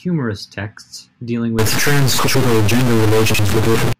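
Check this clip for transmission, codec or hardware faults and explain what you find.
Three kinds of fault are audible in the speech.

From 1.59 s to 3.93 s, starting just after "texts dealing", the sound turns grainy or distorted, and the gaps between phrases fill with a hiss that wasn't there before. The likely cause is a stuck bit, with one data bit held at a fixed value by a faulty line or converter. About half the samples are pushed off by that bit's weight, depending on the waveform, so loud passages distort and quiet ones become noise. On a waveform the pauses no longer fall to silence but sit at a raised, jagged floor. A spectrogram shows broadband energy spread across the whole band throughout that span.

Frames out of order occur twice, at 2.26 to 2.45 s and at 3.56 to 3.76 s. Each time, two adjacent blocks of about 92.9 ms are swapped, which fits four codec frames each, so a short stretch plays its second half first. 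It comes across as a garbled flutter. The waveform shows abrupt envelope breaks at the start, middle and end of each swapped stretch. A spectrogram shows vertical lines at those joins and formant tracks that jump rather than continue. No time goes missing.

Chunks out of order appear at 3.30 to 3.39 s. A chunk of about 46.44 ms arrived one chunk late and plays after the chunk that should follow it. Nothing is dropped, but the order is wrong, and that moment sounds briefly jumbled. A waveform shows discontinuities at the three hard joins. On a spectrogram they appear as thin vertical broadband lines, with the pitch and formant contours breaking and resuming out of sequence.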